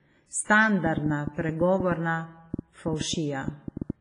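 From the start, the speech carries heavy WMA compression damage. It sounds washy and ringing, with breathing hiss. Nothing is heard above 10.4 kHz, which fits a low bitrate near 24 kbps.

From 0.86 to 3.91 s, a train of clicks ticks over the sound. There are about twenty of them, unevenly spaced at roughly 6.6 per second and peaking about 10 dB above the speech. They likely come from interference or a faulty connection or power supply.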